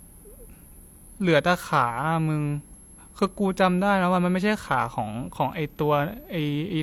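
A switching supply whistle runs under the speech from start to end. It is a thin, high tone wandering between about 11.1 and 11.3 kHz, sitting roughly 30 dB below the voice. A switching power supply, running in an audible burst mode or beating with another supply, is leaking into the signal.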